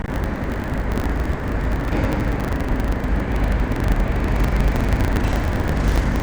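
A recording of everyday sounds with buffer tearing throughout: a steady robotic rattle at about 25 Hz, present only while sound is playing. The writer and the playback hardware have drifted out of step, so each 40 ms period carries roughly 70% stale audio from about 70 ms earlier, with hard joins on both sides.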